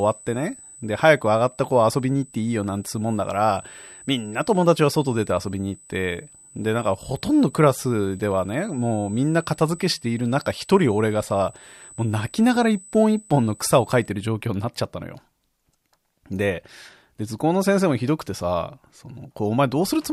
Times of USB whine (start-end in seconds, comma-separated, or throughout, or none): 0.00-14.09